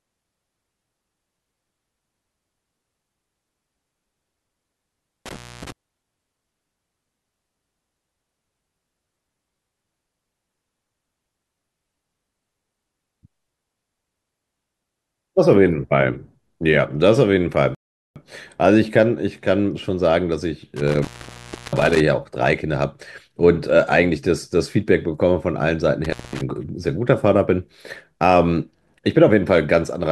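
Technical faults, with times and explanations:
5.26–5.72 s, 20.77–22.00 s, 26.04–26.41 s: intermittent contact. Crackly dropouts leave faint hiss for about 270, 680 and 210 ms while a loose connection briefly opens.
17.75–18.16 s: rebuffering stall. The speech halts into silence for 410 ms, then resumes exactly where it stopped, as playback waited for more downloaded audio.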